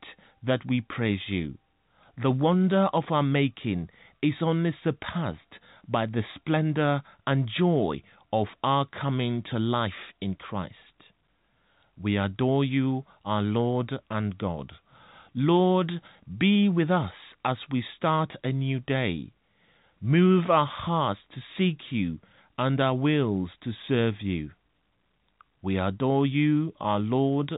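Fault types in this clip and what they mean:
No faults detected; the speech is carried over G.711 A-law telephone coding at 64 kbps, with nothing above 3.8 kHz and at most faint coding damage, as that channel normally produces.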